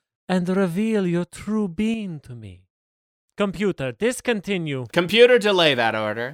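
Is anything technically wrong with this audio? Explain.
Yes. At 1.94 s, right after "and reveal your true", the speech and the background noise drop together by about 6 dB and stay lower to the end. This is a sudden gain jump, likely a digital gain change applied between adjacent samples without any ramp.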